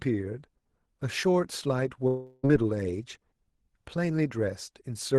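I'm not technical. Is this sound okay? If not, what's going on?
No. From about 2.07 to 2.45 seconds the speech breaks off, and for roughly a third of a second you hear a smeared buzzy continuation of the last sound instead of the real audio. It never goes fully silent, and the speech then resumes without that missing stretch. This is likely a long network dropout: the connection briefly stopped delivering audio, and the call software filled the gap by stretching out what it had last received.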